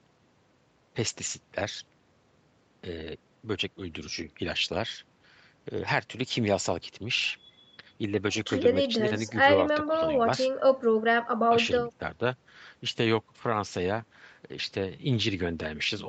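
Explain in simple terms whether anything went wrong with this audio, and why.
Nothing went wrong with this speech recording. It passed through a normal call connection, which keeps the sound up to about 8 kHz, so the very highest frequencies are missing, as is usual on a call.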